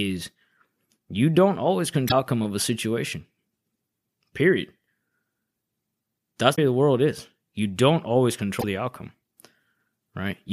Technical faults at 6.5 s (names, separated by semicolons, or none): damaged data in a compressed stream